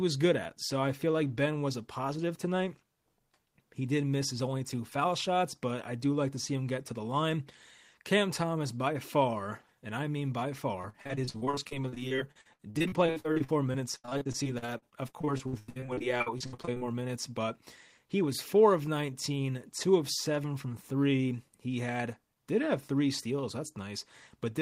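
From 10.81 to 16.82 s there is repeated packet loss, heard as robotic sound. Audio data went missing or arrived late again and again. Dozens of short holes fall across these six seconds, the longest about 84 ms. Each hole was patched by stretching the last bit of sound. Roughly a third of the stretch is this patched fill. The speech turns choppy and robotic, with pieces dropping out.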